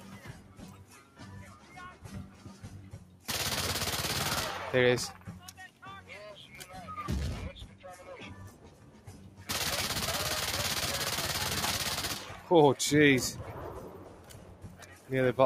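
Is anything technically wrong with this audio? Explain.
Yes. Throughout, the sound pumps and thins, its level swinging by roughly 10 dB: a noise suppressor applied to music or sounds treats steady tones and tails as noise to remove.

Sound cut by the noise suppressor occurs at 0.34–1.2 s, 1.54–1.75 s, 2.31–2.46 s, 2.97–3.26 s, 5.51–5.83 s, 7.67–7.84 s, 8.51–9.44 s and 13.93–15.1 s. Held or decaying sound sinks by about 5 to 7 dB because the suppressor misreads it as noise.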